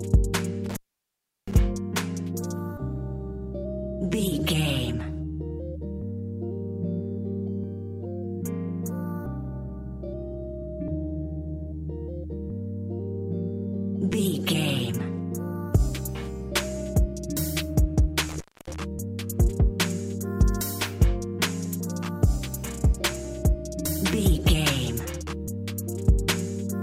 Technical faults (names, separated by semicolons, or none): intermittent contact